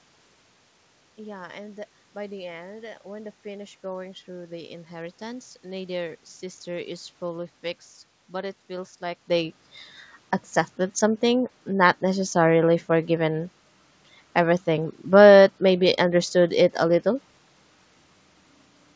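No technical faults can be heard in this speech recording.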